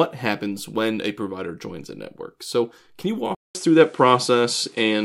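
At 3.35 s the speech drops out for about 200 ms, then returns duller and narrower to the end, with its level shifted by around 5 dB and a new noise floor sitting roughly 35 dB under it. The cause is likely an input switched to a poorer device partway through. On a spectrogram a brief blank gap appears, after which all energy above 11.4 kHz is gone; the waveform shows a step in amplitude across the gap.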